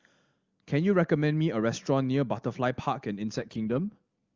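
Speech, carried on an AMR-WB (HD Voice) link that sounds clear at first, suffers an AMR rate drop from 3.38 to 4.01 s. The voice turns rough and synthetic, consistent with the codec stepping down from 23.85 to 8.85 kbit/s. Unlike packet loss, there is no gap, and unlike a bandwidth switch, the band stays the same.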